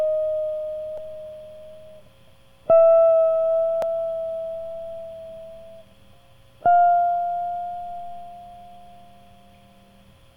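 At 0.98 s and again at 3.82 s the music carries a blip, each only a few milliseconds long, from damaged data in a compressed stream. Corrupted bytes make the decoder misread frames and hunt for sync, giving a short glitch.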